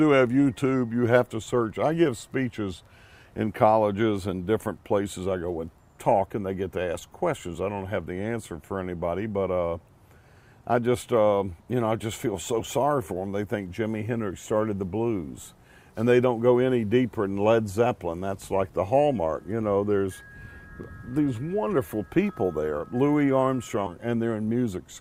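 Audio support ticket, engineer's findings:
Stream segment skipped, 23.86–23.90 s. Likely cause: one segment of the segmented stream failed to load, and the player moved straight on to the next segment instead of stalling or retrying. Symptom: the audio jumps forward abruptly at that point, with a short blip about 35 ms long at the join. Continuity breaks because the content between the two segments is never played. Component: segment fetch and playback sequencing in the streaming player.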